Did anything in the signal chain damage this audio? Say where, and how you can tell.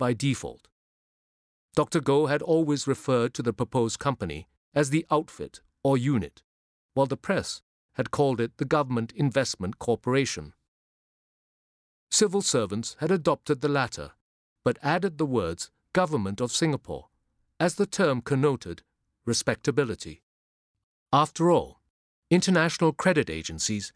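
No, nothing in the signal chain has audibly damaged this speech recording. No stage from capture to playback leaves a mark that can be heard.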